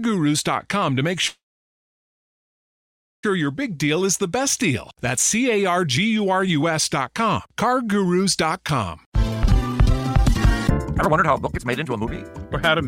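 A call audio freeze runs from 1.27 to 3.25 s. The sound stops and is replaced by a short buzzy continuation of the last moment, which fades within about a tenth of a second into roughly 1.84 s of silence. Nothing is lost; the audio resumes where it stopped, now about 1.96 s later. The likely cause is delayed packets draining the jitter buffer. On a waveform this appears as a brief decaying tail and then a flat line; a spectrogram shows a smeared band that fades to an empty gap. From 9.06 to 12.13 s a jitter buffer speed-up plays the audio at about 159% of normal rate with the pitch unchanged, so it sounds hurried. Around two seconds of backlog is cut by removing many tiny pitch-period-length pieces. Spectrogram harmonics keep their frequencies while events crowd closer in time, and the waveform looks compressed horizontally with frequent small splice points.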